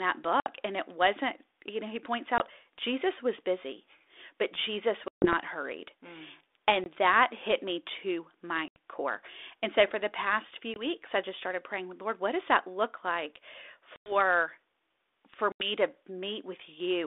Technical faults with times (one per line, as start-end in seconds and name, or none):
0.40-0.47 packet loss on an ADPCM call
2.38-2.41 packet loss on an ADPCM call
5.08-5.34 packet loss on an ADPCM call
6.84-6.90 packet loss on an ADPCM call
8.68-8.76 packet loss on an ADPCM call
10.74-10.83 packet loss on an ADPCM call
13.96-14.15 packet loss on an ADPCM call
15.52-15.67 packet loss on an ADPCM call